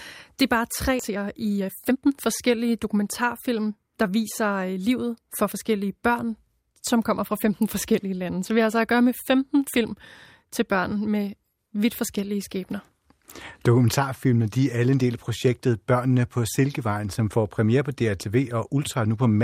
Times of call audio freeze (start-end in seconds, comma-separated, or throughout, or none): none